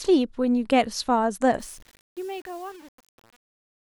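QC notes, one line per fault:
1.6–4.0 s, truncation distortion on a fade: the fade-out stage, beginning around 1.6 s, drops low bits without dither, leaving a resolution that fits roughly 7 bits, so from 1.65 s the speech collapses into coarse square steps and sounds gritty.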